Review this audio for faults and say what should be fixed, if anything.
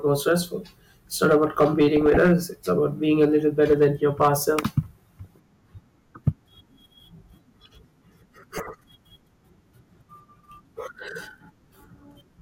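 Hard clipping shows up three times in the speech. From 1.23 to 2.33 s the level is pushed about 6 dB past what the stage can pass, and from 3.22 to 4.79 s, right after "about being", it's over by about 5 dB. At 6.28 s there's a brief overload of about 3 dB. Each time the peaks get shaved flat, which adds harsh high harmonics that come across as crackle on the peaks. To prevent it, set gain so peaks leave headroom, or use a limiter ahead of the converter.

DAB burbling hits twice: 1.97 to 2.17 s, overlapping the first clipped stretch, and 8.57 to 8.70 s. Weak reception let bit errors slip through the error correction into the MP2 data. Wrong samples then put short blips of noise in individual sub-bands over the speech. The duration points to a handful of frames hit each time, at a bit error rate well under 1 percent. To prevent it, improve reception with a better antenna or placement, or take the feed from a wired source.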